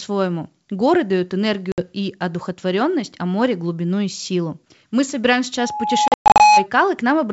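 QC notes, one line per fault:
1.72–1.81 s, packet loss on an ADPCM call: about 60 ms drops to hard silence just before "и одухотворенность а море", likely around three lost packets. Afterwards the decoder's predictor and step size are briefly out of step, so the audio comes back slightly distorted before settling.
5.58–6.66 s, loudspeaker feedback squeal: the mic is picking up its own speaker, and an 843 Hz tone builds over about 0.7 s until it sits roughly 10 dB above the speech. Loop gain passes one at that frequency, so it keeps feeding itself.
6.08–6.41 s, packet loss on an ADPCM call: 240 ms of gaps spread over about 320 ms, with the longest hole 120 ms. That points to roughly ten lost packets. Each gap cuts hard to silence, and the return glitches while the adaptive decoder catches back up.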